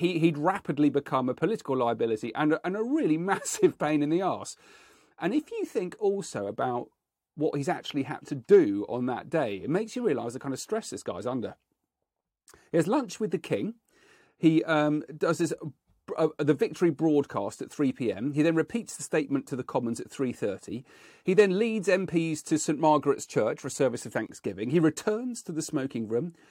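At 24.26 s the speech drops out for about 26 ms, a brief hole with smeared edges, and at 24.29 s it resumes exactly where it stopped, with nothing skipped. This is a gap at a join of encoded pieces: two separately encoded segments were butted together untrimmed, so the padded final frame of one and the start-up delay of the next both remain as silence between them.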